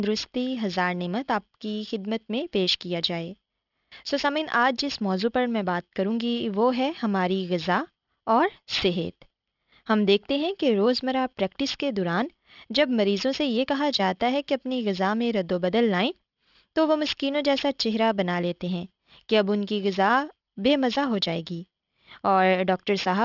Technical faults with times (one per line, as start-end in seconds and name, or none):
0.00-23.25 aliasing